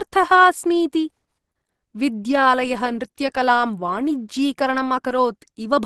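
Throughout the speech, a muffled, hoarse and grainy quality points to heavy low-rate Opus compression as the likely cause. The encoder's hybrid speech mode leaves no content above 12 kHz, fitting a rate around 16 kbps, and its noise-filled bands sound rough rather than swirly like MP3.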